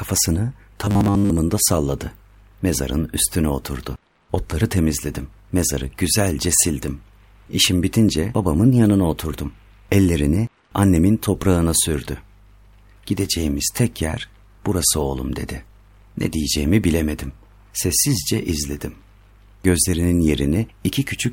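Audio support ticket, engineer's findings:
Robotic sound from repeated short buffers, 0.85 to 1.32 s. Speech collapses into a rigid metallic buzz at 100 Hz. Most of that stretch is repeated fragments. Likely a starved playback buffer looping about 10 ms of audio while real audio is skipped.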